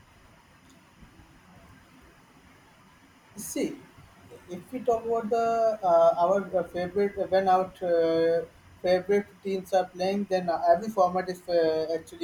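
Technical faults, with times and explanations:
Throughout: timecode bleed. Linear timecode from an adjacent track or cable is leaking into the speech path. Its square wave flips between roughly 1 kHz and 2 kHz, a steady chirping warble sitting about 40 dB below the speech, whose rhythm fits 25-frame-per-second code.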